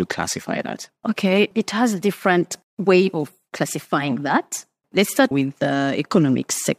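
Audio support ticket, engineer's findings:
No faults found on listening.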